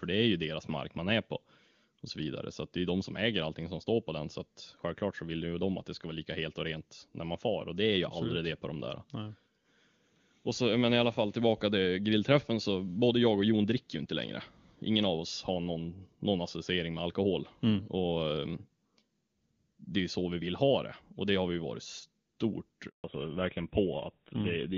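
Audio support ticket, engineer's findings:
Handover gap, 22.88–23.04 s, right after "har vi varit stort": audio cuts out for 160 ms as the call switches networks mid-stream. No speech frames received during the switch, so that stretch is lost outright, not concealed.

Fallback to narrowband, 23.04 s to end: bandwidth collapses, nothing above 4 kHz. Call renegotiated off HD Voice at handover; the sound suggests AMR-WB at about 23.85 kbit/s dropping to GSM full rate. Duller, rougher tone from here on.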